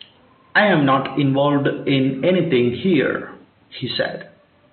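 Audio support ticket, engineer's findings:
No faults found in the speech signal; the only background is the recording room's own ambient noise, sitting about 40 dB below the speech, which is part of the capture and not a system defect.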